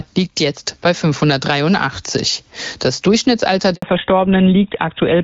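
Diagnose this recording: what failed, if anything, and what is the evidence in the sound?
Gain pumping runs through the whole recording. The gain swings by roughly 15 dB. Loud and soft parts sit squashed together. The likely cause is gain set far too high, with a fast limiter clamping it.

A handover gap at the network stage cuts the speech at 3.74 s. The sound dies away quickly and stays silent for 80 ms, until 3.82 s. No speech frames arrived while the call switched links, so that stretch is simply lost.

Fallback to narrowband follows from 3.82 s to the end. The call drops from wideband AMR-WB at 12.65 kbit/s, which carried light codec texture, to GSM full rate at 13 kbit/s. Nothing above 4 kHz remains. The speech turns duller and rougher.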